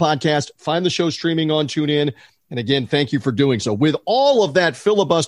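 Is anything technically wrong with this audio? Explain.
No, nothing in this speech recording shows a technical fault.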